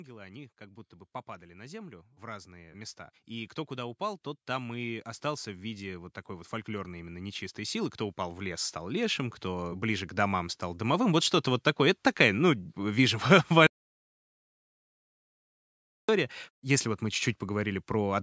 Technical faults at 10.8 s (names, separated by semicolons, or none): automatic gain rising